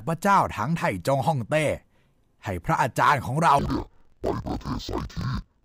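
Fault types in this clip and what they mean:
Interleaved audio read as planar: from 3.59 s to the end, the speech drops an octave and turns doubled and choppy. Alternating left and right samples are being split so the first half of each block is taken as left and the second as right. With 1024-sample blocks of about 23 ms, each half plays at half speed while the overall pace holds, giving a 12-semitone drop and a flutter at roughly 43 Hz from the block boundaries.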